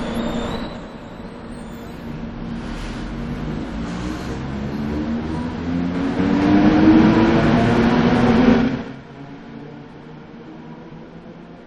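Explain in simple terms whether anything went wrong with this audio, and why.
Near the start, between 0.51 and 0.86 seconds, there's a fault called zipper noise. The volume drops noticeably there, but instead of gliding down it comes down in a handful of small jumps, about ten a second. Each jump lands as a tiny click, so for that short stretch you hear a ticking or zipping laid over the sound.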